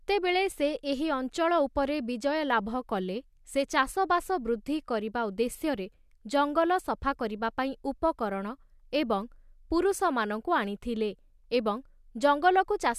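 No technical faults can be heard anywhere in this speech recording; the signal runs without dropouts, clicks, distortion or other defects.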